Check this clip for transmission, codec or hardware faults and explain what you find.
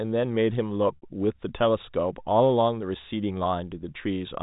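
One transmission fault occurs in this speech: a brief dropout at 0.96 to 1.02 s, heard through the 4 kHz telephone band of G.711 coding.

From 0.96 to 1.02 s the sound briefly sticks on a held, buzzy tone that fades toward silence before speech resumes with a quick cross-fade. This is packet loss with pitch repetition. About 60 ms of audio went missing, which fits two lost packets, and the receiver looped the last pitch period to fill the gap while fading it out.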